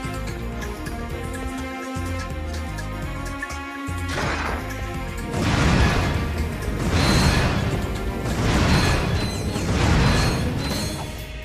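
From 5.38 s to 11.2 s a video or display buzz appears, about 15 dB below the sound: a screen or video cable leaking its 75 Hz field rate into the audio, with gritty hash above it. Unlike mains hum, 75 Hz matches neither 50 nor 60 Hz.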